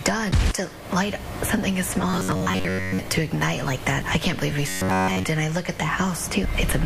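From 2.10 to 2.99 s, and again from 4.69 to 5.24 s, the sound turns into a robotic buzz at about 94 Hz, likely from repeating short buffers of roughly 10.7 ms. The first stretch is mostly repeats, the second entirely. A waveform shows identical cycles, and a spectrogram shows evenly spaced harmonics.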